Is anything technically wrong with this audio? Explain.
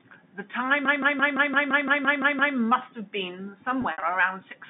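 Yes. Two faults stand out.

From 0.85 to 2.56 s there is a system hang loop. The computer or driver stalled while the sound hardware kept replaying its ring buffer. One 170.67 ms slice of audio repeats exactly, about ten times. That length fits an 8192-sample buffer. The loop rate is 5.86 Hz, so it sounds like a machine-gun stutter, not a buzz. Little or no audio is lost when it resumes.

From 3.82 to 4.02 s there is packet loss with pitch repetition. About 100 ms of audio went missing, scattered across 200 ms, which points to several lost packets. The receiver filled each gap by repeating the last pitch period and fading it out. The short gaps sound like a briefly held, buzzy tone. The longest gap runs 60 ms, long enough to fade into silence before the speech cross-fades back in.

The G.711 telephone coding is audible as a narrow 150 Hz to 3.7 kHz band.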